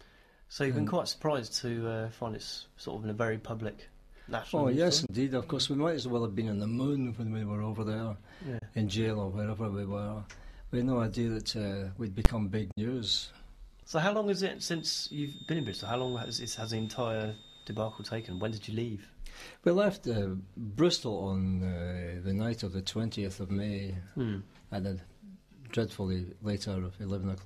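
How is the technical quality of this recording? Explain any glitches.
The recording has three kinds of glitch: brief dropouts, one loud bang, and a sustained whistle.

Digital broadcast dropouts at 5.06 s, 8.59 s and 12.71 s: the receiver lost valid frames and muted, giving short holes of roughly 40, 40 and 60 ms with quick fades.

Invalid numbers at full scale at 12.25 s: a calculation produced invalid values that were forced to full scale for about 10 ms, heard as a single sharp bang.

Feedback whistle from 14.5 to 18.7 s: a thin 3.7 kHz tone about 20 dB below the sound that swells and fades slowly, likely from a loudspeaker-to-microphone loop sitting right at the edge of feedback.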